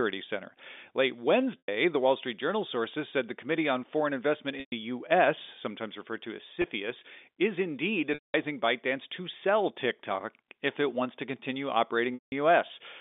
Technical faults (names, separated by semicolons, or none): packet loss with pitch repetition